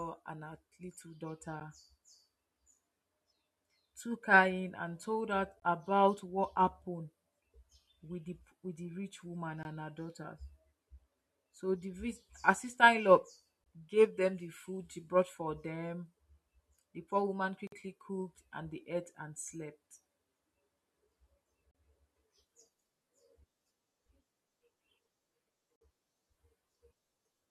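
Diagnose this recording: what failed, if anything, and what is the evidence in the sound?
The streaming stage mis-timed its 4-second segments, so the player pads each boundary with silence, a gap between stream segments. Hard-edged holes of 10 to 53 ms cut the speech at 1.60, 5.60 (after "in and told her"), 9.63, 13.64, 17.67, 21.71 and 25.76 s.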